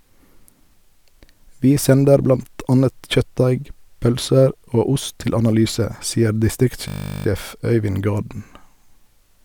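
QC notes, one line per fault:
6.88–7.26 s, system hang loop: one 20 ms slice of speech repeats 19 times as the playback buffer cycles during a freeze, giving a steady 50 Hz buzz. The waveform shows identical repeating cycles; the spectrogram shows flat harmonic lines every 50 Hz.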